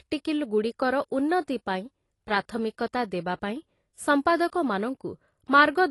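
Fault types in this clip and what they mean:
AAC compression: The speech sounds dull and smeared, with nothing above 11.5 kHz. This likely comes from low-bitrate AAC coding, fitting about 32 kbps.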